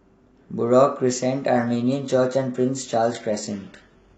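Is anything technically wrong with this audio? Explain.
Yes. From 1.58 s to the end, the speech suffers an adaptive stream at a lower bitrate. The player switched versions without a gap, so the treble suddenly turns thin and synthetic, which fits a drop from 96 kbit/s AAC to 16 kbit/s HE-AAC. A spectrogram shows the upper band abruptly becoming smeared at 1.58 s, while the waveform stays continuous.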